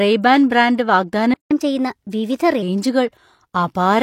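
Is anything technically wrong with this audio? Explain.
Yes. There are two faults, one directly after the other.

A playback stall runs from 1.34 to 1.51 s. The speech cuts to silence for about 167 ms, then resumes. The likely cause is the player running out of buffered data, or its output thread being briefly blocked.

Catch-up at higher speed follows from 1.51 to 2.62 s. The player works through its backlog by resampling at 1.15 times normal speed. The speech sounds hurried and raised by roughly two semitones, then drops back to normal.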